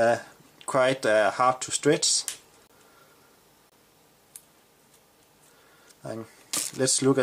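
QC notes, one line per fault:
2.67–2.70 s and 3.70–3.72 s, gap between stream segments: two hard-edged silent holes of about 24 ms each, one second apart, which fits 1-second segments whose time stamps don't quite meet. The player pads each gap with silence, so nothing is lost, just briefly interrupted.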